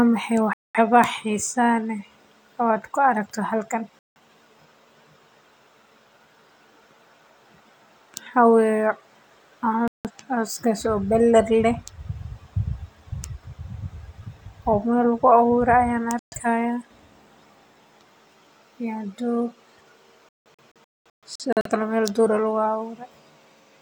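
The speech drops abruptly to silence at 0.53 to 0.79 s, 3.99 to 4.19 s, 9.88 to 10.11 s and 16.19 to 16.36 s, each gap lasting roughly 0.13 to 0.21 s. From 20.29 to 21.70 s it breaks into several short holes totalling about 0.73 s, the longest about 0.21 s. These are digital broadcast dropouts: the receiver lost valid frames and muted until clean ones returned, so the speech in those gaps is gone.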